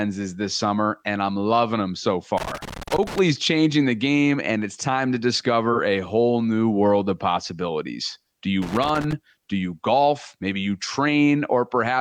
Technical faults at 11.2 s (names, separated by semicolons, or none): none